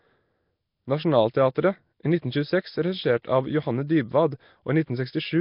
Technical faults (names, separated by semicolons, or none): Nellymoser compression; pre-echo